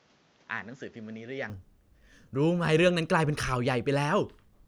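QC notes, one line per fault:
0.0–1.5 s, input switched to a poorer device: the opening speech is band-limited, with nothing above 7.6 kHz, so it sounds duller and sits a few dB quieter, with a faint noise floor well below the signal. At 1.5 s it opens to full band with no gap, likely because recording began on a lesser microphone before changing over. On a spectrogram the top edge cuts off flat at 7.6 kHz until 1.5 s, and the waveform steps up slightly there.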